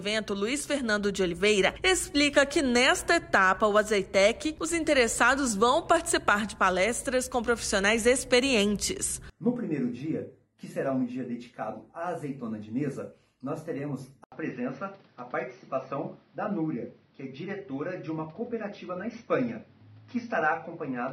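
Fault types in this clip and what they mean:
Input switched to a poorer device: at 14.24 s the sound drops out for 80 ms, then returns duller and boxier through to the end, with nothing above 6 kHz and a new, faint noise floor well below the signal, while the level stays about the same. The likely cause is the recording input changing mid-stream to a narrower-band microphone or a headset's call profile, which brings its own tone and background noise.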